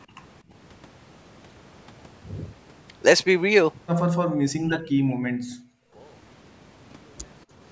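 From 4.58 to 5.64 s the speech collapses by roughly 40 dB. This is speech suppressed in double talk, likely from an echo canceller mistaking the talker for loudspeaker echo. The waveform shows a shrunken envelope, and the spectrogram shows the harmonics fading.

At 5.92 to 5.97 s the room sound briefly dips by about 11 dB. This is background gated by the echo canceller, which clamped the microphone while the loudspeaker played. It is a 50 ms notch in the noise floor, a thin vertical darker band across the spectrogram.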